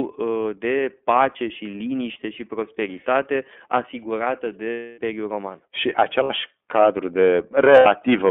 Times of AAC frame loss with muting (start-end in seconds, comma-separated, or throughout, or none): none